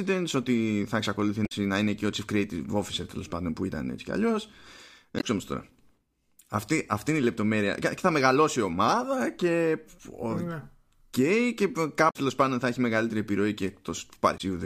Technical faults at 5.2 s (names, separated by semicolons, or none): damaged data in a compressed stream